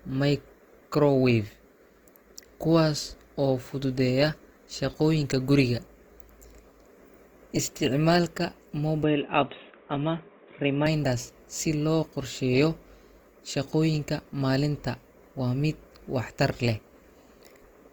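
A speech clip with audible coding damage from start to finish: the audio keeps its full bandwidth, extending to about 20.2 kHz, but tonal parts of the voice come through grainy and rough, with a noisy texture where band energy has been filled in. There is little swirling. That pattern points to the likely cause, Opus compression in its music (CELT) mode, at a rate that fits roughly 24 kbps. From 9.03 to 10.87 s the sound abruptly turns dull and narrow, with nothing above 3.8 kHz, then clears again at the end of that span. There is no gap at either switch and the level stays about the same, with a faint new noise floor far below the speech. This points to the input being switched to a poorer device for that stretch, likely a lower-grade microphone or a headset running its call profile.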